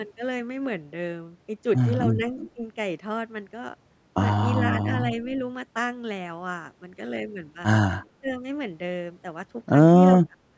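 At 2.39 s, running to 2.5 s, there's a short echo leak: a faint ghost of the speech trailing about 370 ms behind, roughly 20 dB under the main voice. That's likely a far-end loudspeaker being picked up by its own microphone, with the echo canceller letting a bit of it slip back down the line.

Right after, you get speech suppressed in double talk, which is likely the canceller mistaking the talker for echo while both sides overlap and pulling the level down. At 2.55 s and 4.82 s these are quick, slight dips, tens of milliseconds each. At 8.2 to 8.43 s the drop gets clearly deeper. From 10.26 s to the end the voice sinks hard, close to cutting out.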